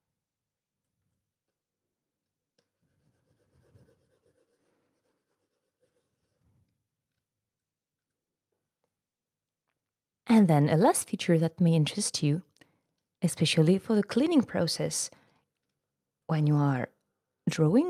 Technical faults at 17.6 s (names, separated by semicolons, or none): none